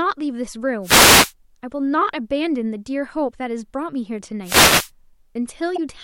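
At 0.82 to 1.33 s and again at 4.43 to 4.91 s there's a wireless microphone noise hit. The FM signal fades as reflections cancel, so receiver noise swells up as a half-second swish of static over the speech before the signal recovers.

Right near the end, from 5.74 to 5.79 s, comes damaged data in a compressed stream. Some bytes in the encoded speech got corrupted, so the decoder misreads those frames and loses sync while it hunts for the next header. You hear it as a quick glitch.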